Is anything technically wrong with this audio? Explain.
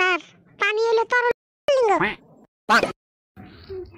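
Yes. There are two faults. At 1.31 s a playback stall cuts the sound for 0.37 s, until 1.68 s. The player likely ran dry or its thread blocked. From 1.68 s to 3.16 s, catch-up at higher speed follows. The player resamples its backlog at 1.25 times speed, so pitch rises by about four semitones before returning to normal.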